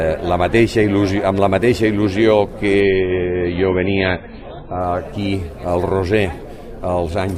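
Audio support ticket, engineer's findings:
Adaptive stream at a lower bitrate, 2.80 to 4.80 s. Abrupt quality drop with no gap: treble gone above 4.5 kHz, swirly, metallic codec artefacts, then a sudden return. Spectrogram shows a hard horizontal ceiling at 4.5 kHz across that 2 s block. Waveform stays continuous. Probable component: player's rate adaptation switching to a low rendition, consistent with roughly 128 kbit/s MP3 falling to about 16 kbit/s.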